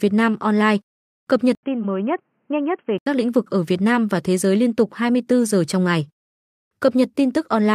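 An input switch to a poorer device runs from 1.55 s to 3.06 s, beginning just after "cập nhật" and ending just before "lĩnh vực ở". An 80 ms gap opens the change, then the speech turns dull and boxy, with nothing above 3.2 kHz, drops a few decibels in level, and carries a faint new noise floor well below the speech. The likely cause is the system rerouting capture to a narrowband microphone or headset call profile before switching back.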